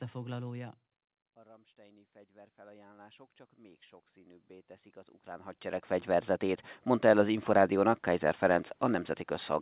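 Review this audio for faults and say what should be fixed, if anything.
From 1.46 to 7.31 s, voice and room noise swell together. This is automatic gain rising, adding about 18 dB after the input level dropped by about 18 dB. To prevent it, keep the talker at a steady distance from the microphone, or limit how far and how fast the automatic gain control can climb.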